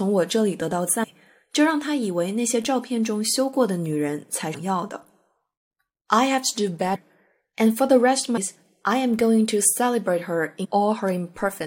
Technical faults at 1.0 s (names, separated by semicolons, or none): compressed frames skipped